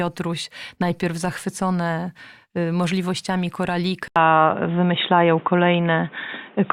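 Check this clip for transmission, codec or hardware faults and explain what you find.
One fault. At 4.08 s the input likely switched to a poorer device. An 80 ms gap marks the switch. From there to the end, nothing passes above 3.8 kHz, so the sound turns dull and boxy. The level shifts a few decibels, and new background noise appears.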